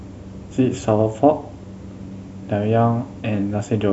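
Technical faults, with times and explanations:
No technical faults can be heard anywhere in the clip. There is nothing to time or explain.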